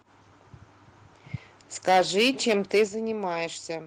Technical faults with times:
1.88-2.84 microphone overload
1.89 microphone volume stepped down
2.88 microphone volume stepped down

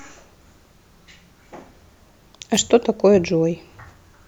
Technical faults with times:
2.53-2.60 wireless microphone noise hit

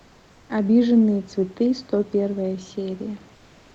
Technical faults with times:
0.00-0.49 comfort noise in place of the background

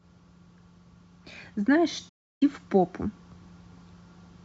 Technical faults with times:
2.09-2.42 digital broadcast dropout

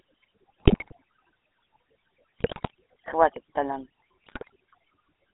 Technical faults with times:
0.00-5.34 overdone noise removal
0.00-5.34 GSM full-rate codec
0.60-0.93 GSM bit errors
2.39-2.71 GSM bit errors
4.24-4.50 GSM bit errors

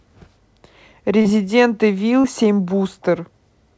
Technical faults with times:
1.22-1.28 short concealed packet loss
2.21-2.27 short concealed packet loss

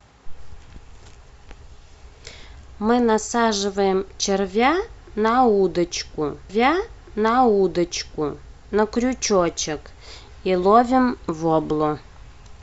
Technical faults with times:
6.49-8.49 stream segment repeated

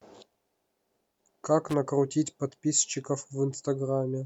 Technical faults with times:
1.69-1.74 loose connector crackle

